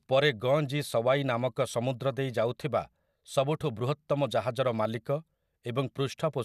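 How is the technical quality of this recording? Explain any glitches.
No technical faults can be heard anywhere in the recording, so there are no glitches to explain.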